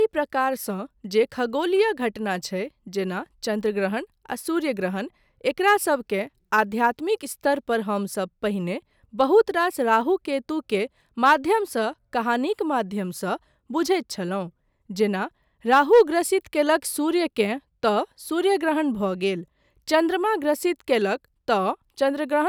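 Sample clock jitter runs through the whole recording. The converter's clock wanders, so each sample lands a little early or late. Timing errors of under a microsecond turn into amplitude errors wherever the waveform moves fast. The result is a faint hiss and roughness riding on the speech, roughly 45 dB below it. It swells on loud passages and sharp, bright consonants. It drops away in the pauses, where there is no slope to disturb.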